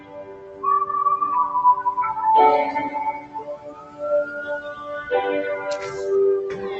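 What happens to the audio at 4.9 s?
Sound cut by the noise suppressor, from 4.6 s to 4.93 s, so 4.9 s falls near the end of the dip. The suppressor mistook this stretch for noise and pulled it down harder than its surroundings, by about 10 dB at the deepest point, over roughly a third of a second. Whatever is sustained or decaying there sinks and loses its tail, while any sharp onset comes through more intact, so the moment sounds hollowed out before the level recovers just after 4.93 s.

That dip sits within a wider fault: a noise suppressor applied to music or sounds, active across the whole clip. Because it is tuned for speech, it treats steady tones, ambience and reverberant tails as noise and keeps turning them down. Its gain swings by around 15 dB, so the sound pumps and thins. Transients pass while held material fades.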